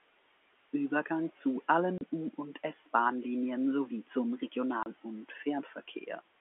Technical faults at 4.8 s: packet loss filled with silence

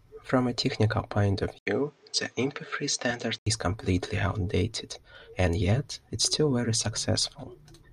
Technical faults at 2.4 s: input switched to a poorer device

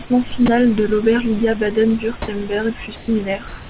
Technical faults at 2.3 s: sound dropped by the voice detector

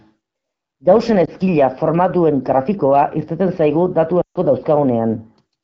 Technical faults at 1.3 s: lost AMR speech frames

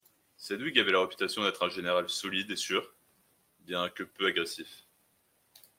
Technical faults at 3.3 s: none

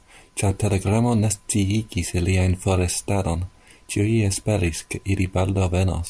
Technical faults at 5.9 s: none

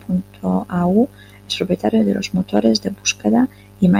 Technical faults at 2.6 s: hard clipping

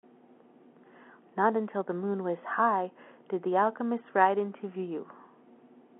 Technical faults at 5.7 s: none

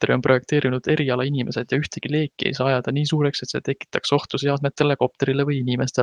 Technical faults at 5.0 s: none

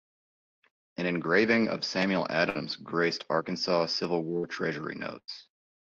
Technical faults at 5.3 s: burst of packet loss

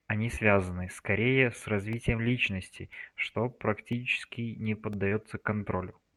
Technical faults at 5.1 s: periodic USB or driver dropouts; short concealed packet loss

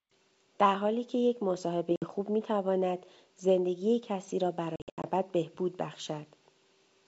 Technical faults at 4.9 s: packet loss on an ADPCM call

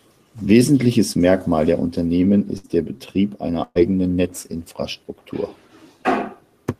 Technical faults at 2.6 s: burst of packet loss

